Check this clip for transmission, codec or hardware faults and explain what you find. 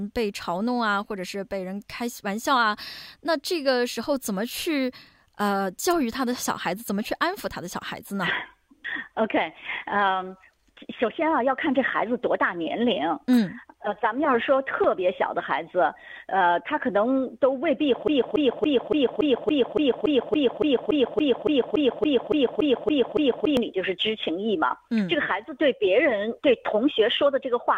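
One fault is present. From 18.08 to 23.57 s there is a broken-record loop: a 0.28 s fragment repeats 19 times, back to back and identical. The player or stream likely stalled and kept resending its last buffered fragment, so the intervening audio is lost. Unlike an echo, the repeats never decay or overlap.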